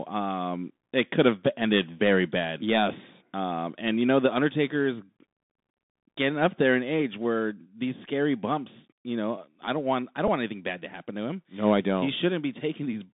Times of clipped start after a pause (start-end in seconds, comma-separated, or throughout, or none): none